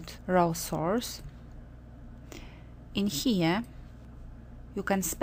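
No technical faults can be heard anywhere here.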